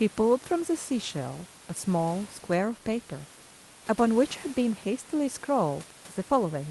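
No technical faults are audible.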